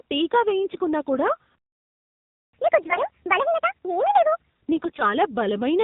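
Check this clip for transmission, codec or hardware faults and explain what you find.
Several faults are audible: narrowband mobile coding throughout, three bursts of AMR bit errors, a playback stall, and a catch-up at higher speed afterwards.

The whole clip passed through the AMR narrowband mobile codec. It samples at 8 kHz and rebuilds speech from a vocal-tract model excited by a sparse set of pulses, so nothing above 4 kHz survives and the speech sounds muffled. The coding damage is plainly audible as a buzzy, synthetic edge, which fits a low mode around 7.4 kbps, where too few bits are left to shape the excitation naturally.

AMR bit errors corrupt the speech at 0.70–0.80 s, 2.82–2.99 s and 4.76–5.14 s. Over a weak link, bits in the less protected part of each frame arrived flipped. The error rate was substantial, on the order of a tenth of those bits. Because the checksum over the critical bits still passed, the decoder used the damaged data instead of concealing it. 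Excitation pulses landed in the wrong positions, and fine pitch, gain and spectral values drifted. Pitch and loudness roughly hold, but the speech turns hoarse, scratchy and gargly. The first two bursts are short, covering what sounds like a few frames each. The last lasts nearly 0.4 s and is the longest stretch of gargle.

A playback stall silences the output from 1.55 to 2.53 s, a gap of about 0.98 s. The player was likely starved of data or had its thread blocked. The output had nothing to play until it recovered, so the speech cuts off mid-flow and resumes after nearly a second of dead air.

Catch-up at higher speed follows from 2.53 to 4.50 s. To recover the lost time, the player resampled its backlog and ran it 1.5 times faster. Resampling raises speed and pitch together, so the speech sounds hurried and lifted by about seven semitones, a chipmunk-like shift. At 4.50 s it drops back to normal rate and pitch.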